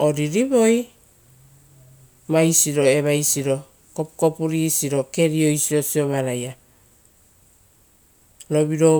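No technical faults can be heard in the recording, and the speech signal stays intact and continuous throughout, with nothing in it that points to a problem in capture, processing or transmission.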